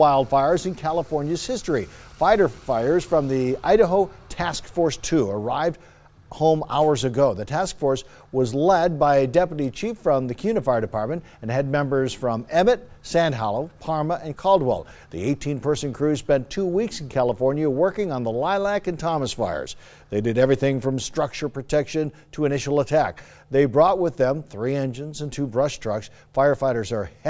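Nothing technical goes wrong here; I listened all the way and didn't catch a single problem anywhere in the audio.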